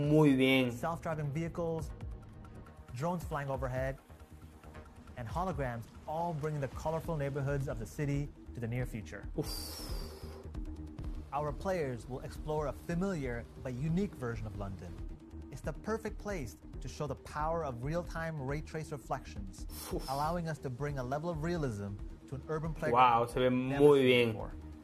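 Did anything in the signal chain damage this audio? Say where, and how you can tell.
Yes. At 11.01 s, damaged data in a compressed stream at the codec stage produces a brief glitch. Corrupt frame bytes made the decoder misread that frame and resynchronise.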